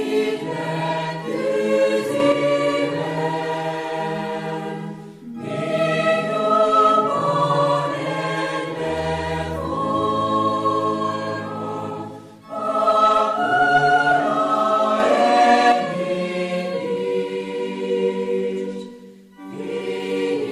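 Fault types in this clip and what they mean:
Sudden gain jump: sound and background noise rise together instantly, about 5 dB and about 6 dB, likely an unramped gain change, unlike a fade.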